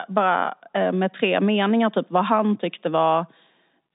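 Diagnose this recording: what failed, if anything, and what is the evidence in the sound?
Nothing in this recording failed at any stage. The speech sits in the telephone band, about 150 Hz to 3.7 kHz with nothing above 3.8 kHz, which fits a working G.711 mu-law line at 64 kbps, and its quantisation noise is at most faint.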